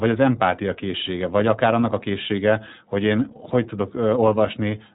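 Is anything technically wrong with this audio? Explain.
Yes, the whole speech clip carries iLBC codec damage: each independently coded 20 ms frame, fitting roughly 15.2 kbps, sounds rough and synthetic, and the spectrogram shows nothing above 3.8 kHz.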